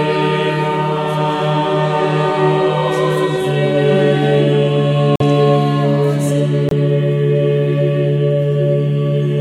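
Damaged compressed frames that the decoder rejected, with silence substituted, cause two corrupt frame muted dropouts in this music clip. The music cuts out abruptly at 5.16 s for about 56 ms (to 5.21 s) and again at 6.69 s for about 38 ms (to 6.73 s). Each gap's length points to a couple of lost frames. The music resumes at the correct point after each hole, so timing holds.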